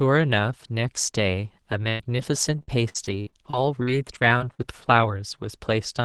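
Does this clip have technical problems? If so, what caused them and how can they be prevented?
Yes. From 1.83 to 4.60 s the speech turns choppy and robotic, with missing pieces. This is repeated packet loss: packets dropped again and again, and each hole, up to about 100 ms, was patched by stretching the preceding sound. A steadier network connection with forward error correction enabled would prevent it.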